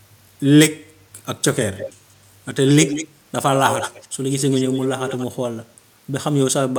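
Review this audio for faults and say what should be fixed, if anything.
Echo leak appears at 1.77–1.93 s, 2.66–3.08 s, 3.53–4.08 s and 4.3–5.26 s. A copy of the speech trails the original by 183 ms. It is strongest around 2.66–3.08 s and quieter elsewhere. The likely cause is a far-end loudspeaker whose echo canceller let some of its own playback return. A spectrogram shows the harmonic bands repeated slightly later and fainter, and the waveform shows smeared secondary bursts. To prevent it, retune or strengthen the far end's acoustic echo cancellation, or switch that side to a headset.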